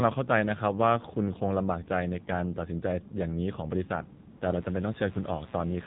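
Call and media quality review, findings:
AMR narrowband mobile codec, whole clip. Speech band-limited, buzzy and synthetic throughout. Spectrogram: hard ceiling at 4 kHz, empty above; smeared, pulse-driven harmonics in voiced parts. Probable component: AMR-NB encoder at a low mode; the plainly audible damage points to roughly 7.4 kbps, where a few excitation pulses per 5 ms subframe can't carry the real voice detail.

AMR comfort noise, 4.30–4.40 s. Real background replaced by a flat, smooth hiss for 100 ms, switching in and out abruptly. Waveform: a short block of steady, featureless noise with clean edges. Spectrogram: a uniform band with none of the surrounding texture. Probable component: sender's silence detection halted speech frames; the receiver synthesised noise from a coarse level-and-spectrum description.

Mains buzz, 4.50 s to end. Steady, raspy buzz, around 20 dB below the speech. 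Spectrogram: evenly spaced horizontal lines at multiples of 60 Hz reaching several kHz, unbroken through speech and gaps. Waveform: a regular spiky ripple visible in the quiet stretches. Probable component: dimmer, rectifier or unshielded line coupling switching spikes twice per mains cycle.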